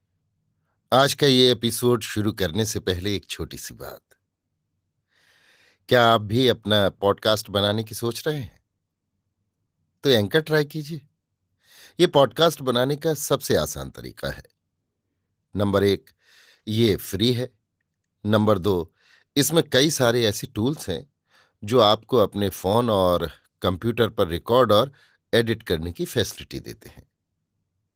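No technical faults occur anywhere in this speech recording.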